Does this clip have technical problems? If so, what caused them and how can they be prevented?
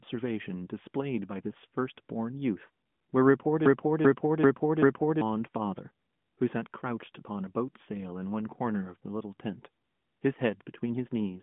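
Yes. A broken-record loop runs from 3.66 s to 5.21 s: a fragment of about 0.39 s plays four times back to back, identical each time, and the audio that belonged in that stretch never arrives. The likely cause is a stall in the player or stream, which kept re-sending the last buffered piece instead of new audio. The narrowband phone-line sound, with nothing above 3.7 kHz, is present throughout. Prevention: use a jitter buffer that fills gaps with silence or concealment rather than looping stale data.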